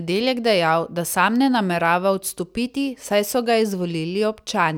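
Nothing stood out as a technical problem on listening to this speech recording.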